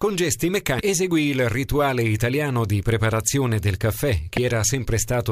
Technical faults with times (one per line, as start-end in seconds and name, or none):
0.79-0.81 damaged data in a compressed stream
4.37 damaged data in a compressed stream